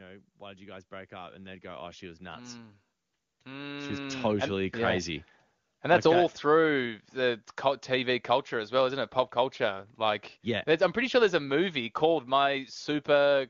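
It's a speech clip where automatic gain rising kicks in from 0.39 to 5.05 s: the AGC judged the input too quiet and gradually ramped everything up by about 19 dB. The AMR wideband (HD Voice) codec path sounds like a high-rate mode with clean-sounding band-limited speech.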